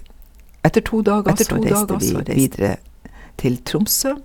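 From 0.64 s to 2.54 s there's a doubled audio track: a second full-band copy of the speech runs roughly 0.7 s behind, at about the same level as the original. It has no reverb tail or room colour, so it sounds like two overlapping takes, not an echo, and it cuts in and out abruptly at both ends. The likely cause is the signal being captured twice, once through a slower path, or an edit leaving two out-of-step copies.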